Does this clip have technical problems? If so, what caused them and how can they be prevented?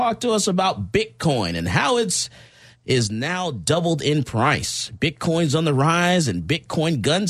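Yes. A sudden gain jump drops the speech and background noise together by about 6 dB from 3.07 to 3.67 s, likely from an unramped digital gain change. Ramping gain changes over a few milliseconds prevents it.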